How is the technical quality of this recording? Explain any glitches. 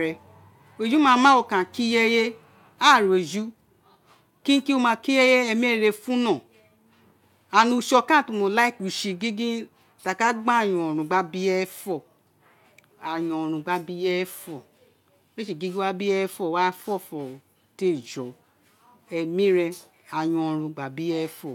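Nothing stood out on listening; there are no glitches in this speech recording to explain.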